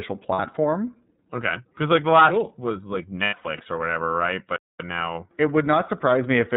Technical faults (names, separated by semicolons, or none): iLBC codec; lost iLBC frames; playback stall